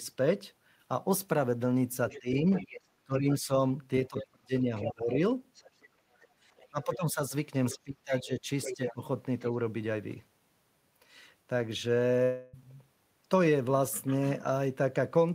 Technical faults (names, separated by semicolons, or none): other side's voice leaking through; speech suppressed in double talk; background gated by the echo canceller; long network dropout